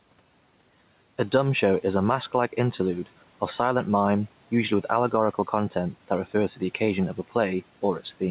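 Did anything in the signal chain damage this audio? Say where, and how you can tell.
Yes: gain pumping throughout, from call processing. Gain likely set far too high makes a fast limiter duck each loud passage, and the background swells back around 5 dB between them.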